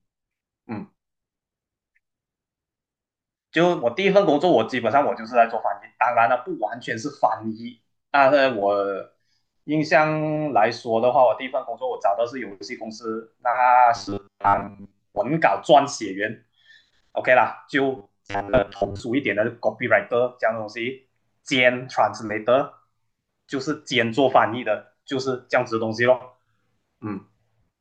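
A speech clip with robotic sound from repeated short buffers from 13.96 to 15.18 s and 17.97 to 19.02 s: a rigid 100 Hz metallic buzz, likely from late audio being covered by looping a 10 ms fragment, replacing most of the real sound. Spectrograms show flat harmonics at 100 Hz multiples, and waveforms show identical repeating 10 ms cycles.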